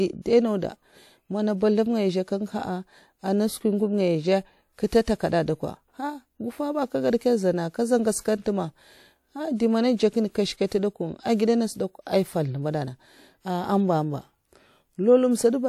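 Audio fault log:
4.86–4.92 s, pre-echo: a short hiss of about 58 ms leads into the attack before "kada ah", softening its onset. The transform block's quantisation noise, sized for the loud attack, was spread across the block and filled the quiet stretch preceding it.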